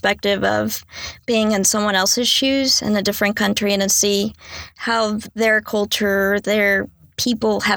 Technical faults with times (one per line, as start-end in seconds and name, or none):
none